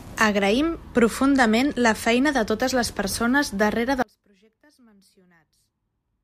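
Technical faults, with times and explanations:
4.02 s to end: audio dropout to a faint residue. The incoming signal was likely lost while the path after the break stayed live, so the speech cuts off abruptly and the remainder holds only faint sound, roughly 35 dB below normal level.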